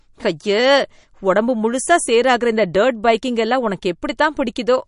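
A starved encoder, likely MP3 compression at a low bitrate consistent with roughly 40 kbps, runs through the whole of this speech clip. Short of bits, it removes everything above 10.6 kHz, so the treble stops abruptly and the top end sounds dull. It also drops quieter frequency detail that flickers in and out between frames, giving the sound a watery, swirling texture, with metallic chirping on s sounds and smeared consonant attacks.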